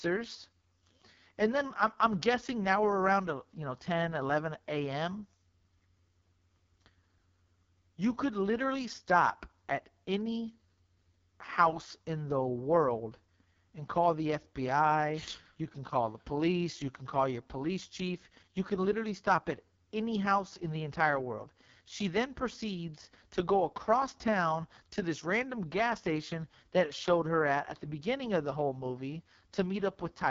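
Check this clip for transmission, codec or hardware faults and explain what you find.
One codec fault runs through the whole recording. It is the AMR wideband (HD Voice) codec, and it is working hard. From start to finish the speech sounds rough and raspy, and nothing is heard above about 7.2 kHz. The codec models speech as pulses driving a vocal tract filter up to 6.4 kHz and fills the band above with shaped noise. At its lowest rate the pulse coding is crude. The heavy grit fits the 6.6 kbit/s mode.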